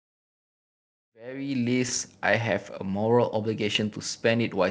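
Around 1.85 to 2.02 s, just as the fade-in settles, and again at 3.75 to 3.87 s, you get bit errors on an ADPCM link, roughly half a percent and then 0.4 percent of bits flipped. Each one knocks the G.722 decoder's step size and predictor off, so it comes out as pops and gritty bursts with quick level jumps.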